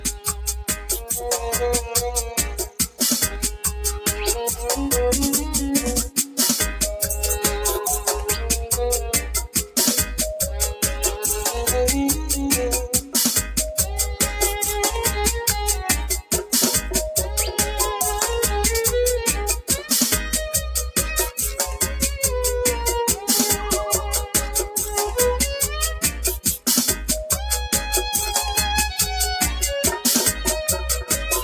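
Across the whole recording the level breathes and pumps, sustained parts and tails sinking by around 5 dB while sharp onsets push through. That is a noise suppressor applied to music or sounds: a speech-tuned processor treating steady tones and ambience as noise. Sound cut by the noise suppressor is clearest at 0.0–0.32 s, dropping about 9 dB, and at 2.63–3.01 s, dropping about 11 dB. In both places the suppressor judged the sound to be background and pulled it down harder than its surroundings, thinning it.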